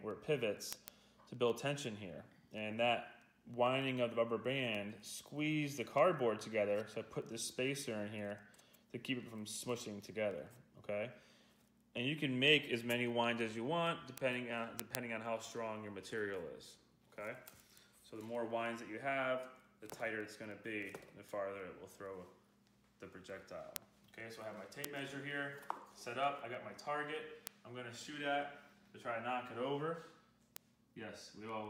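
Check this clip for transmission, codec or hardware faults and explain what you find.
One fault runs through the whole clip: word clock ticks. They start at 0.11 s and continue to 31.65 s. The ticks come at a steady rate, roughly every 0.15 s, about two hundred in all. The receiving device runs on its own clock, not locked to the sender's digital link. The two clocks differ by something like 150 parts per million. Each time they slip past each other, one sample is dropped or repeated. That leaves a brief, sharp tick, repeating evenly through the sound.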